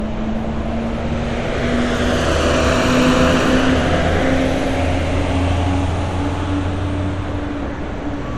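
From start to finish, nothing is heard above 14.4 kHz. The top end sounds dull and closed in. This is likely low-bitrate audio saved at a high bitrate. The cut-off fits a 64 kbit/s MP3 encoding. A later 256 kbit/s MP3 pass could not restore the lost detail.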